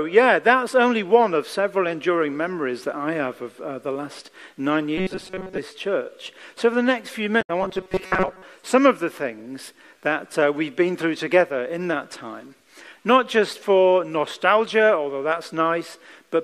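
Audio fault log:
4.98–5.58 s: robotic sound from repeated short buffers. A rigid metallic buzz near 188 Hz, likely from a roughly 5.3 ms stretch replayed while most new audio was skipped.
7.38–7.50 s: damaged data in a compressed stream. A brief glitch as the decoder misread corrupted frames and resynchronised on the next header.
7.62–8.42 s: robotic sound from repeated short buffers. The same 188 Hz buzz returns, likely because a roughly 5.3 ms buffer repeated, replacing most of the real audio.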